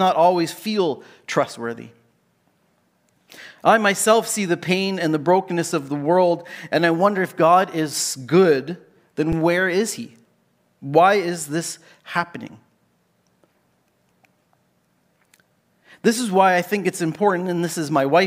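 Speech with an underrun with held sample at 9.32 s: a 6 ms flat stretch in the waveform, spectrogram blank, during which roughly 7 ms of audio was lost.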